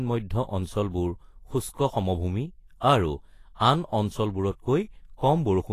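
The speech was likely encoded with Vorbis compression at a low setting, which fits a bitrate around 32 kbps. Nothing survives above 14.2 kHz, and from start to finish the treble is plainly audible as hissy, grainy noise, with roughened tone and softened attacks.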